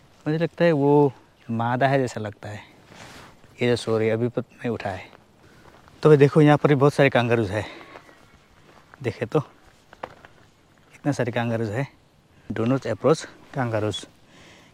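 No technical faults can be heard anywhere in the clip.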